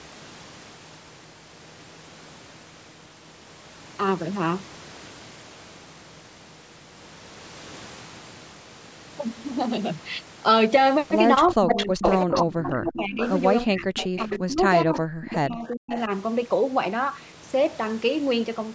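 Speech recorded over a call, band-limited by the call's microphone processing to nothing above 8 kHz, carries a clear echo leak in its later part. From 11.51 to 13.30 s a second copy of the speech trails the original by about 0.4 s (399 ms), roughly as loud as the talker. Fainter repeats, well below the speech level, return from 13.84 to 14.38 s and from 15.66 to 16.0 s, each lagging by about 0.41 s. The steady delay points to a far end playing the call on a loudspeaker, where its echo canceller likely let part of the microphone pickup through and sent it back. Over the same stretches the speech itself is suppressed in double talk. From 11.52 to 13.2 s the voice sinks in deep dips, and from 13.65 to 16.1 s it drops almost to silence in places, with each span losing around a second and a half of level in pieces. This likely comes from the echo canceller failing to separate the talker from the returning echo while both overlap, so it turned both down.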